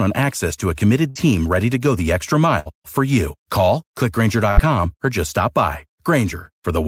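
Three bursts of packet loss interrupt the speech, at 1.09 to 1.18 s, 2.59 to 2.73 s and 4.51 to 4.60 s. Each time, about 60 ms of audio never arrived. The receiver bridged the gap by stretching the last sound while fading it, heard as a brief held buzz or dying hiss before the speech jumps ahead. Spectrograms show frozen harmonics dimming, then an abrupt change; waveforms show a repeating, shrinking cycle.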